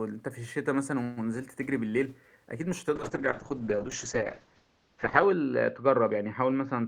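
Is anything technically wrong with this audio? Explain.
Yes, there are two faults: a call bitrate drop that lasts to the end of the clip, and a brief case of chunks out of order inside it.

From 2.97 s onward the speech goes through a call bitrate drop. The connection's bandwidth estimate fell and the encoder was switched from 32 kbps to about 7 kbps. With so few bits it quantises the signal more coarsely and narrows its coded bandwidth from 20 kHz to 8 kHz, so the speech turns rough, watery or muffled, and it does not recover before the clip ends. On a spectrogram, the energy above 8 kHz disappears abruptly at 2.97 s, leaving a flat ceiling for the rest of the clip, with the remaining bands looking blockier.

At 3.92 s there are chunks out of order. One 5.33 ms chunk arrived or was written one chunk late, so it plays after the chunk that should have followed it. No audio is lost, but the swap creates three hard joins within about 10 ms, heard as a tiny garbled blip. 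On a waveform, the joins appear as abrupt jumps in the trace where the segments don't line up.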